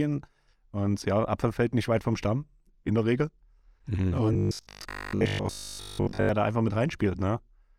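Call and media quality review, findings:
Robotic sound from repeated short buffers, 4.33 to 6.29 s: speech turns into a rigid metallic buzz at 50 Hz. Likely a playout buffer underrun repeating a 20 ms chunk through most of the span. Spectrogram shows a fixed 50 Hz harmonic comb; waveform shows identical repeating cycles.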